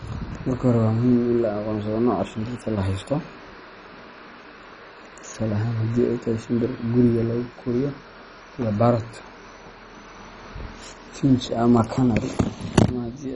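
Throughout the speech, nothing survives above 10.4 kHz, and heavy gurgling, granular distortion with flickering upper bands points to likely MP2 compression at a very low bitrate.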